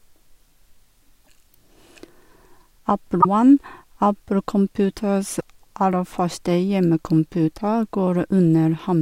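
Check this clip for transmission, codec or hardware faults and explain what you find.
Damaged data in a compressed stream occurs four times: 1.21 to 1.29 s, 3.18 to 3.26 s, 5.37 to 5.41 s, and at 7.60 s. Corrupted bytes make the decoder misread frames and lose sync, so the speech breaks into brief chirps, squawks, clicks or short holes, each under a tenth of a second.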